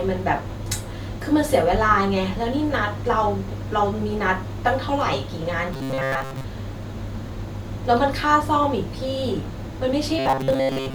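A speech clip with robotic sound from repeated short buffers at 5.73 to 6.44 s and again at 10.19 to 10.95 s. In both stretches the voice collapses into a stiff, metallic buzz at 134 Hz that only loosely tracks the speech. That pitch points to a fragment of about 7.5 ms being looped for most of each span, likely because audio was arriving too late. A spectrogram would show evenly spaced horizontal harmonics of 134 Hz, and the waveform would show one short cycle repeating identically.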